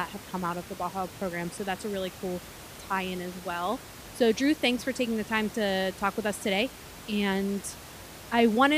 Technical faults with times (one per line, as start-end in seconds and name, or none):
none